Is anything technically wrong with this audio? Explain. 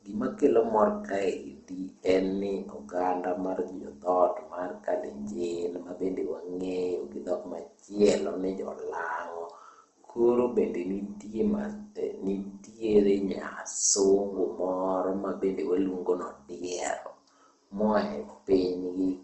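Yes. Throughout, the speech shows likely Opus compression at a low bitrate near 16 kbps: band-filled, grainy, rough texture and nothing above 8.1 kHz.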